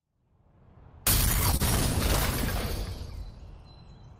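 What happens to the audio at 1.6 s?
A short concealed packet loss occurs from 1.57 to 1.61 s. The receiver extends the preceding sound to cover the gap, producing a brief smear visible as blurred spectrogram bands.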